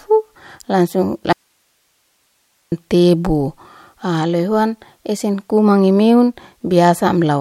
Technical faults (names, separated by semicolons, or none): audio dropout to a faint residue